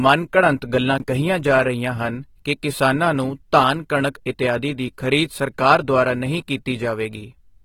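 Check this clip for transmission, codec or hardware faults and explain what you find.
Two faults are present: lossy codec damage across the whole clip, and one brief reordering of audio chunks.

The speech was likely squeezed through AAC compression at a low rate, consistent with AAC-LC at roughly 30 kbps. The encoder starved its quantiser of bits and discarded fine spectral detail. The codec damage is plainly audible throughout: the speech sounds dull and smeared, with a watery, fizzy texture on sibilants and held sounds. Nothing survives above 19.4 kHz.

Between 0.98 and 1.02 s, chunks play out of order. A 20 ms block of audio arrived or was written one chunk late, so it plays after the block that should have followed it. No audio is lost, but the sequence is wrong and the swap leaves three hard joins. The result is a brief jumbled, garbled instant.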